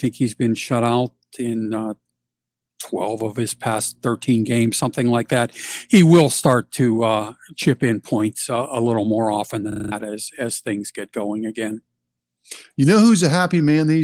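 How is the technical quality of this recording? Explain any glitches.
The recording has one clear glitch, a system hang loop from 9.72 to 9.92 s. The system stalled while the sound hardware kept cycling through its ring buffer, so one 40 ms slice of speech repeats five times. The result is a rapid 25 Hz stutter that replaces about a fifth of a second of audio. Throughout the clip, the Opus voice compression adds only slight coding texture.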